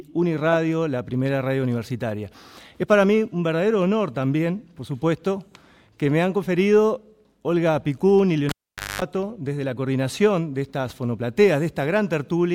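A pop at 8.49 s, near silence, 50 Hz mains buzz, then another pop at 9.02 s: a live cable pulled and plugged back in.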